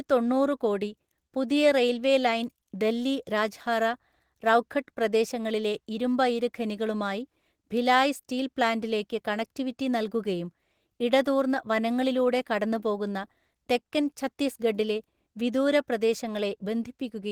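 Listening to this speech recording, nothing stood out as a technical problem at any point.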